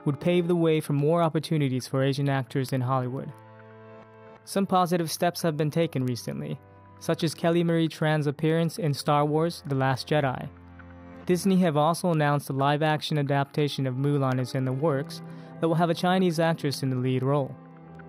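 A receiving device running on its own clock, about 100 ppm off the sender's, drops or repeats a sample each time the two clocks slide past each other. The result is word clock ticks from 0.27 s to 17.95 s: around seventy sharp clicks of uneven strength, about five per second.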